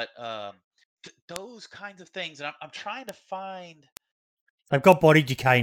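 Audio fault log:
1.36 s, 3.09 s, 3.97 s, 4.92 s: bit error spike. A single flipped bit in memory or on the digital link threw a run of one to three samples off by a power of two before the values snapped back. Each event is an isolated, sharp, broadband tick unrelated to the speech. The ticks peak at about -8 dBFS at 1.36 s (just before "kinds of things and") and at 4.92 s, and at about -14 dBFS at 3.09 s (after "I'm I'm trying to") and 3.97 s (after "I'm trying to find").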